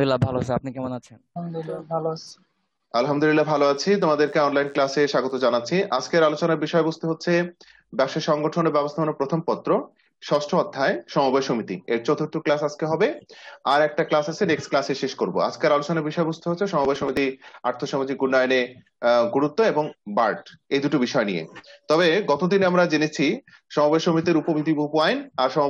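From 3.13 s to 5.45 s a DECT cordless phone buzz sits faint under the sound, roughly 40 dB down. A nearby handset or base transmits in bursts every 10 ms, and the audio circuitry rectifies them into a thin, steady 100 Hz buzz with many harmonics.

Between 16.85 s and 17.17 s processor overload crackle appears. The processor misses a run of buffer deadlines in a row, and each skipped buffer leaves a hard-edged gap. The gaps point to buffers of around 10 ms and blur into a short, gritty tear.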